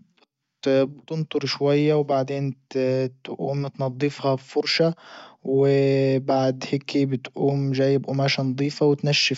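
No technical faults are audible.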